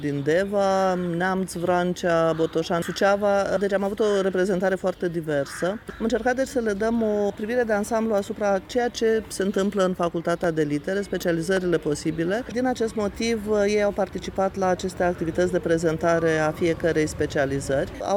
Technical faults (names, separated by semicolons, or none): dropped samples